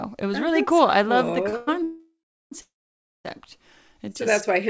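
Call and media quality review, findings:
Short stall from a late packet: 1.49–1.55 s, right after "cool I love the". Last sound held about 38 ms. Jitter buffer ran dry waiting on one packet, stretched the tail, then picked up the same spot. Nothing lost.

Call audio freeze, three hits, each likely packets held up in transit draining the jitter buffer, with playback resuming where it stopped, so nothing skipped, just added delay:
1.57–1.69 s: 100 ms fill, no silence.
1.83–2.53 s: 686 ms fill, fades to about 380 ms of dead air.
2.61–3.26 s: 630 ms, mostly silent, about 570 ms.

Call path itself sounds fine: band stops around 8 kHz, which fits G.722.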